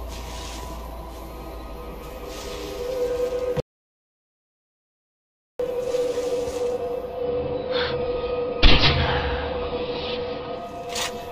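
From 3.60 to 5.60 s an audio dropout to silence leaves two seconds of silence, no room tone, unlike a gate; a lost input is the likely cause. From 6.92 to 10.91 s, digital radio blending to analogue AM cross-fades in over 386 ms, leaving a level change of about 1 dB and faint hiss, unlike a plain filter.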